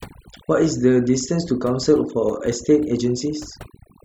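Throughout the speech, overdone noise removal is audible: bands near the noise estimate are cut far down, taking quiet speech detail with them. The background drops and breaks up into twinkling specks, and a spectrogram shows scattered isolated bright dots on dark gaps.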